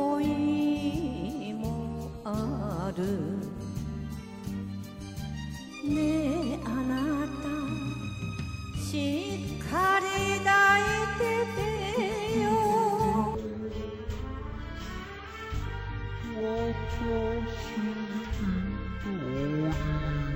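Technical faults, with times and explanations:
13.35 to 20.36 s, stereo read as mono: the left and right samples are taken in turn as one channel, so the sound runs at half speed and drops a full octave, with a fainter mirrored copy in the upper spectrum. A plain slowdown or pitch shift would lack that mirrored image.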